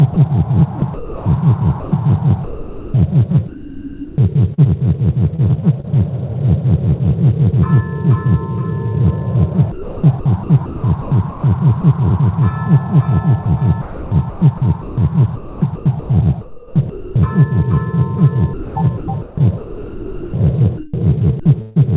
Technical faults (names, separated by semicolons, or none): sound chopped by the voice detector